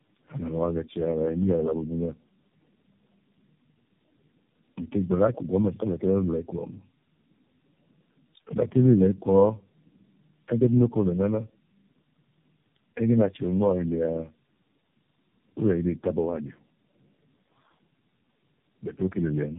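Tandem speech coding runs through the whole speech recording: several low-rate speech codecs in series each re-coded the last one's damaged output, compounding roughness, muffling and warble, with nothing above 3.8 kHz.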